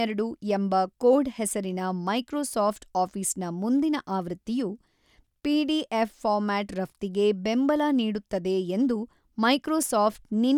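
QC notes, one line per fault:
Nothing stood out on listening, with no fault heard anywhere in the clip.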